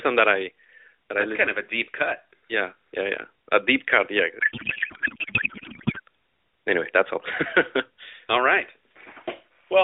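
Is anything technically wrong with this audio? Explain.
Yes. From 4.40 to 6.00 s the speech is replaced by garbled noise and warble that barely tracks it, a codec payload misread. The decoder receives well-formed AMR frames but reads the bits with the wrong packing, which points to octet-aligned data parsed as bandwidth-efficient, so every field lands in the wrong place. Unlike packet loss, there are no gaps or repeated fragments. The sound is continuous nonsense that ends abruptly once the framing matches again, returning to the clip's lightly coloured narrowband phone sound.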